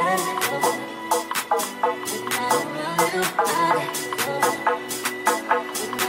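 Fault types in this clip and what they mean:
compressed frames skipped: Whole blocks of encoded audio never play, so the sound jumps forward. This happens at 2.37 to 2.40 s, losing about 50 ms, and at 5.04 s, losing about 100 ms.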